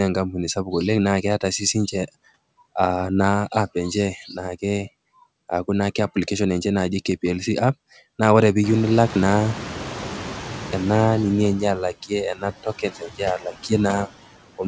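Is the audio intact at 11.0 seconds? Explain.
No. At 11.0 s the noise suppressor is still catching up, from 8.63 to 11.17 s. The room noise jumped by about 23 dB around 8.5 s. The suppressor's noise estimate takes about 2.5 s to follow, so the noise comes through louder and is cut by only about 6 dB.

Noise suppressor artifacts also run throughout. The suppressor pulls steady noise down by about 14 dB frame by frame, so the noise sinks between the words and rises under them.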